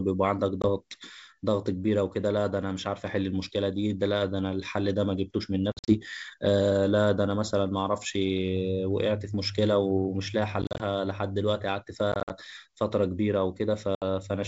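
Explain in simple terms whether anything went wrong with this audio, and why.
Packet loss on an ADPCM call leaves abrupt silent gaps at 0.62, 5.72 to 5.95, 10.62 to 10.81, 12.12 to 12.31 and 13.95 to 14.03 s. Unlike a simple dropout, the speech comes back slightly distorted before settling.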